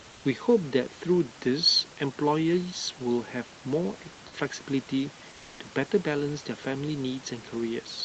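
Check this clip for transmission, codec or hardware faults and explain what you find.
One fault shows up, right at the start. From 0.11 to 0.23 s the room background, about 25 dB below the loud parts, is replaced for roughly 120 ms by comfort noise in place of the background. It is steady, featureless hiss about 1 dB quieter than the real room sound. The likely cause is Opus discontinuous transmission: the sender's voice detector judged the pause silent and stopped sending, and the receiver synthesised shaped noise until real audio resumed.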